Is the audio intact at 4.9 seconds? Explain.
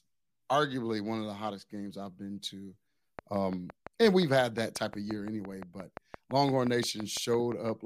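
No. At 4.9 s the speech sits inside a train of clicks running from 3.19 to 7.70 s, just after "games I've been to": about 30 similar pulses at a regular 5.8 per second, peaking roughly 10 dB above the voice. The likely cause is interference or a faulty connection or power supply. Unlike random crackle, the ticks are evenly spaced and continue through pauses.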